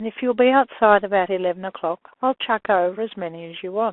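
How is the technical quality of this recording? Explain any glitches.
The quality is poor: the speech goes through a Bluetooth CVSD headset codec the whole way, with plainly audible damage. Everything sits in a phone-like band of roughly 300 Hz to 3.4 kHz, which fits a 64 kbps CVSD link. The codec encodes one up-or-down bit per sample with an adapting step, so sharp, loud sounds outrun it. S sounds turn scratchy, and a grainy hiss sits underneath.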